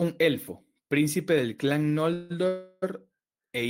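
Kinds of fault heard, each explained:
Call audio freeze: at 2.13 to 2.32 s and again at 2.48 to 2.84 s the speech stalls, and the last sound is stretched into a fading buzz- or hiss-like hold for about 170 ms and then 340 ms, never dropping to silence. Speech resumes exactly where it stopped, so nothing is lost, but each stall pushes the rest about that much later. The likely cause is delayed packets draining the receiver's jitter buffer, with concealment filling the wait.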